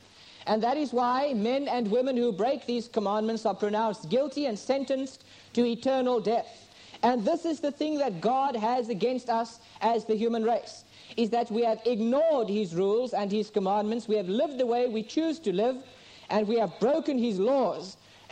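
No technical faults are audible anywhere in the recording.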